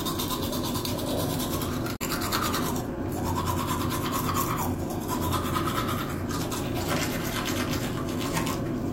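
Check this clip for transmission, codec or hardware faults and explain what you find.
One codec-level fault is present: damaged data in a compressed stream, between 1.95 and 2.02 s. A short run of the encoded bytes there arrived corrupted, so the decoder could not parse those frames correctly, lost frame sync and had to hunt forward for the next valid header before resuming. For about 70 ms the sound is replaced by a brief glitch, and then playback picks up again.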